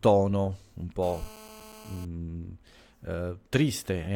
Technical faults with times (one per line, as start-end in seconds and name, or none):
1.03-2.05 GSM phone buzz